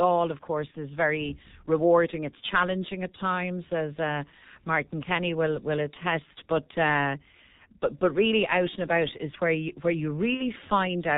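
From the start, the whole recording carries G.723.1 codec damage: muffled, hoarse speech with smeared consonants, which fits a bitrate around 6 kbit/s. On a spectrogram, energy stops at 4 kHz, and the harmonics look blocky in 30 ms steps. At 0.71 to 0.76 s, just before "is very rewarding", VoIP packet loss concealed by the speech codec stretches the sound into a brief fading tail, which fits one lost frame. At 10.34 to 10.42 s, right after "where you where you", a longer concealment fits two lost frames. The waveform envelope shrinks steadily across each gap, and the spectrogram shows repeated, smeared harmonics.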